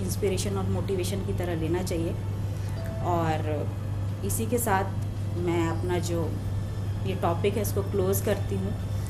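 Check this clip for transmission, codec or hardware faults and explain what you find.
Two problems here: a constant codec coloration and a short burst of reception damage near the end.

MP2 compression runs through the whole clip. The sound is dull and plainly gurgly, with a granular roughness on top. That is most likely MPEG Layer II at a low rate, something like 80 kbps. With that few bits per frame, the encoder drops upper sub-bands and quantises the remaining ones coarsely, so the top end flickers and the texture turns grainy.

DAB burbling shows up from 8.76 to 8.84 s, a short burst of noise blips in single sub-bands. That's what you get when bit errors slip past error correction into the MP2 data. Corrupted samples put short blips of noise in single sub-bands, and corrupted scale factors make sub-bands jump in level for up to a frame. Here it hits six frames, which fits a fairly low error rate, well under one percent.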